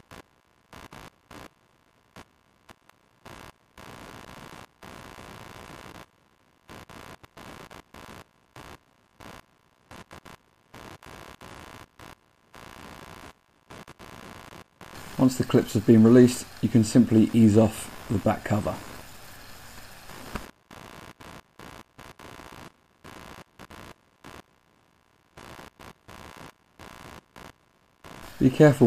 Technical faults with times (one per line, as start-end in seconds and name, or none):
0.00-28.87 computer activity noise